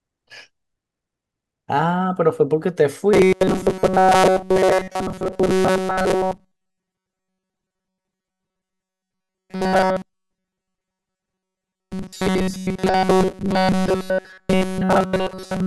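From 3.13 s to the end, the voice becomes a rigid, metallic buzz pinned at 188 Hz that only loosely tracks the speech. This is robotic sound from repeated short buffers, likely starved playback looping slices of about 5.3 ms that replace most of the real audio.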